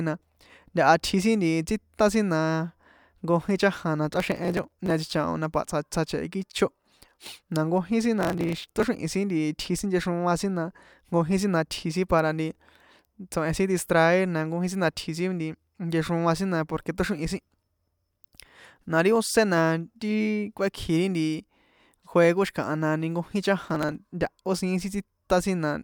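From 4.14 to 4.90 s, 8.19 to 8.84 s and 23.65 to 23.96 s, the speech carries bursts of processor overload crackle. In each burst the processor misses deadlines again and again on very short buffers, each under a millisecond: roughly 50, 70 and 20 misses in turn. Missed buffers are skipped outright, so the waveform jumps across tiny gaps with hard edges. The result is a gritty tearing that rides on the voice and stops when the load eases.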